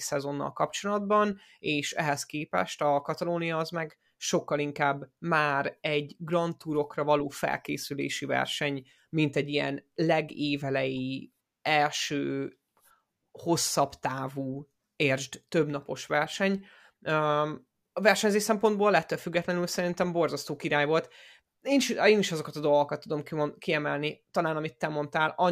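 No audible technical faults.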